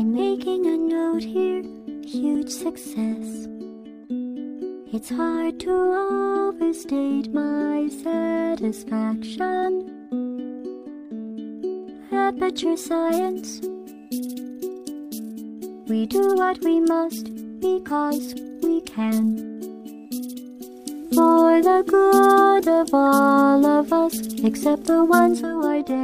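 At 20.50 s the receiver loses its digital signal and falls back to the FM broadcast of the same station, a digital radio blending to analogue. It returns to digital at 25.65 s. Each changeover is a cross-fade of about 0.41 s rather than a hard cut. While the FM path carries the sound, the level shifts by about 5 dB and broadband hiss appears, sitting roughly 40 dB below the signal, until the blend back to digital.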